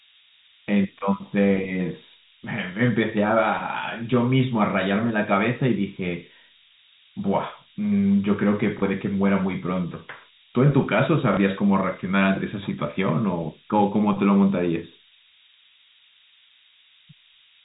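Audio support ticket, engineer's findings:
Low bit depth with noise shaping, whole clip. Steady thin hiss, climbing sharply toward the top of the band, roughly as loud as the speech itself. Fits a 4-bit word length. Rounding error fed back and pushed upward, so the hiss sits mostly in the highs.

Packet loss with last packet repeated, at 0.99 s, 8.79 s, 11.34 s and 17.19 s. Each a brief 30 ms small blip. Fits one lost packet each time. Receiver replayed the previous packet.

The G.711 telephone link is heard only as the expected cut above 4 kHz.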